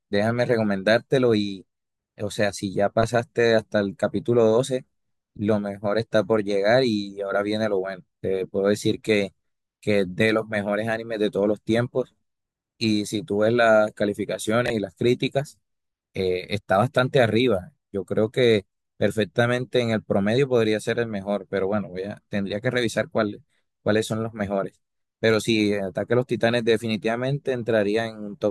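At 14.66 to 14.70 s the speech shows chunks out of order: one 20 ms chunk arrives a chunk late, swapping places with its neighbour. The result is a brief jumbled stutter. The waveform steps abruptly at three joins, which appear as thin vertical broadband lines on a spectrogram.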